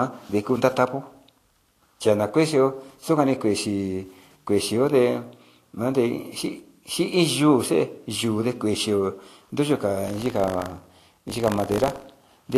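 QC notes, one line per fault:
Throughout, Vorbis compression: nothing above 14.2 kHz, grainy hiss and roughened treble, blurred attacks, likely from a low-bitrate Vorbis encode in the region of 38 kbps.
10.06–12.57 s, buffer tearing: writer and reader cross every period, splicing a small slice of audio about 40 ms old between hard joins, heard as a steady 50 Hz rattle.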